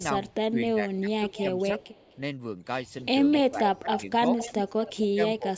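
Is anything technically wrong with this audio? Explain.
Yes. Echo leak appears at 0.28–0.33 s, 1.25–2.18 s, 3.01–3.38 s, 3.94–3.98 s and 4.36–4.97 s. This is likely the far end's echo canceller letting loudspeaker pickup through. It sounds like a copy of the voice delayed by about 253–275 ms, at about 35 to 10 dB below the speech.

Speech suppressed in double talk occurs at 0.5–1.26 s, 3.45–4.22 s and 5.13 s to the end. It likely comes from the canceller ducking the talker during overlap. The voice dips by roughly 10 to 15 dB for a few hundred milliseconds at a time.

Nothing is heard above 8 kHz, which fits ordinary call microphone processing.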